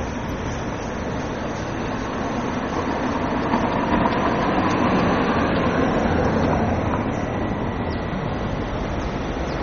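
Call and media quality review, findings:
Throughout, whole clip: MP3 compression, likely cause, at a very low bitrate; the damage is heavy and fits roughly 32 kbps. Encoder starved of bits, treble cut flat at 12.4 kHz, nothing above. Weak frequency lines zeroed and restored frame to frame. Audible result: dull top end, watery, swirling texture, metallic chirps on bright or hissy sounds, transients smeared instead of crisp.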